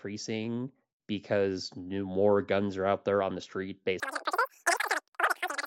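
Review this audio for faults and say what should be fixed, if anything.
From 4.00 s to the end at 5.67 s, just after "there on the street", the speech turns shrill and rushed, running three times too fast and about 19 semitones high. This is a wrong sample rate fault: audio that fits a 16 kHz recording is played back as if it were 48 kHz, with no conversion. To prevent it, carry the true sample rate through the chain and resample explicitly wherever the playback rate differs.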